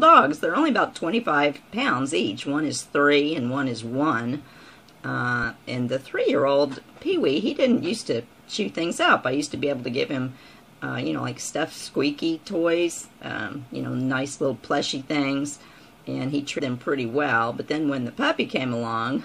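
A broken MP3 bit reservoir is the likely cause: after frames went missing from the stream, the next frames looked back for borrowed data and decoded bytes from the wrong frame, with frames of about 26.1 ms. At 5.42 s the sound jumps ahead with a very brief glitch. At 16.58 to 16.61 s a longer disturbance of around 30 ms is heard, again a skip forward followed by a short glitch before the sound settles.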